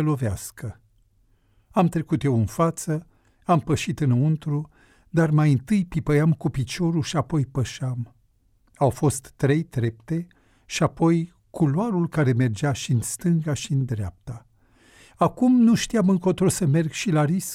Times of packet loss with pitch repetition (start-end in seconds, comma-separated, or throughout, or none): none